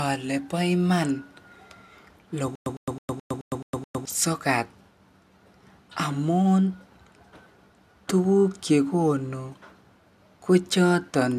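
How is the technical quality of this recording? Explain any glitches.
The recording has one clear glitch, a stutter with silent gaps from 2.55 to 4.05 s: playback likely stalled and kept retrying, so a 106 ms fragment repeats seven times, each followed by 108 ms of dead silence, and the audio from that stretch is lost.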